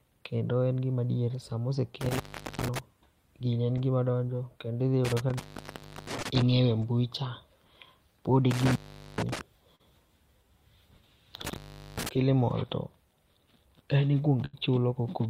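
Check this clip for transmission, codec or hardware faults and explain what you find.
Three kinds of fault run through the clip: four dropouts from a failing connection, two brief concealed packet losses, and one longer burst of lost packets near the end.

Intermittent contact: the speech cuts out four times, with crackle at each edge and only faint hiss while it is gone. The cut-outs occur at 2.01–2.79 s (silent for about 0.41 s), at 5.05–6.42 s between "gi ma donjo kendo" and "e mbui cha" (0.68 s), at 8.51–9.41 s after "pod e" (0.43 s), and at 11.45–12.09 s before "killimall to" (0.41 s). A loose plug or cable is briefly opening the signal path.

Short concealed packet loss: at 6.19–6.23 s, inside the second dropout region, and at 9.75–9.81 s, the sound briefly smears or wobbles. About 20 ms and 40 ms of the call never reached the decoder in time. The receiver filled each hole by extending the preceding sound and then blended back into the real audio, so the loss shows up as a slight blur rather than a gap.

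Burst of packet loss: at 14.45–14.55 s, a longer stretch of about 80 ms is missing. The receiver carried the last sound forward while fading it down, which produces a short held buzz or fading hiss. The speech then picks up again further along, with the audio in between gone.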